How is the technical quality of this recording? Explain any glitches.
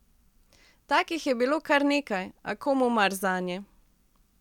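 No technical glitches are audible.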